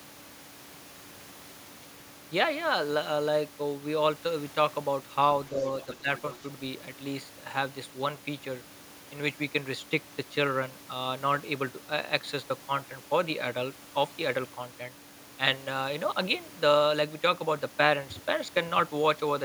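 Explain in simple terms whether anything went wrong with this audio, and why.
The echo canceller likely failed to fully remove the far end's loudspeaker sound, so faint scraps of the other side's voice leak through at 5.81 to 5.96 s and 6.18 to 6.35 s. As both sides talked at once, the canceller also likely turned down the talker, causing speech suppressed in double talk: the voice briefly dips quieter between 5.86 and 6.08 s.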